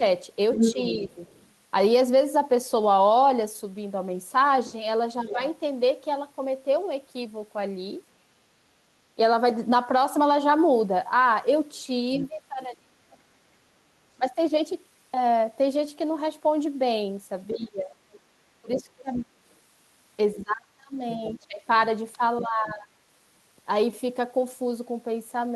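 From 0.0 to 1.05 s the speech dips by about 5 dB in short pieces, roughly a fifth of a second in all. From 0.55 to 1.49 s a second voice comes through at about the same level as the talker. Between 5.23 and 5.39 s there is a brief dip of about 10 dB, and from 5.27 to 5.41 s the other voice leaks in at about 15 dB down.

The speech then drops sharply. From 8.43 to 9.18 s it falls by about 35 dB. From 12.21 to 14.37 s it falls by about 25 dB, totalling about a second. From 17.52 to 22.89 s it falls by about 25 dB again, over roughly two seconds in all. In that last stretch, from 18.74 to 22.45 s, the other side's voice leaks through at about 15 dB below the speech.

The dips are most likely speech suppressed in double talk. With both sides talking at once, the echo canceller could not tell the local talker from the loudspeaker echo, so it turned both down. The second voice is the other side's voice leaking through, likely echo from the loudspeaker that the canceller failed to remove from the microphone.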